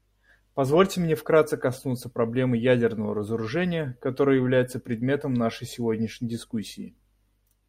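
Nothing in the speech here stands out as a technical fault; it just runs along without any glitch worth pointing to.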